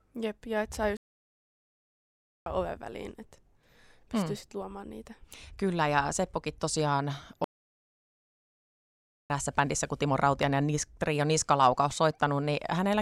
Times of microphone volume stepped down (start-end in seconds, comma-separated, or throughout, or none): none